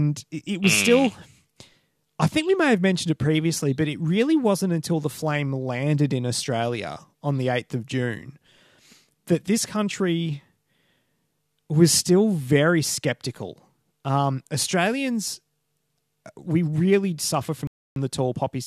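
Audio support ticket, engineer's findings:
Rebuffering stall, 17.67 to 17.96 s, right after "we really". Speech drops to dead silence for about 0.29 s, then resumes exactly where it stopped, with nothing skipped. Probable component: the playback buffer, which ran dry while waiting on the network download.

Waveform: flat silent gap with abrupt edges on both sides. Spectrogram: a blank vertical band across all frequencies, with speech energy continuous either side.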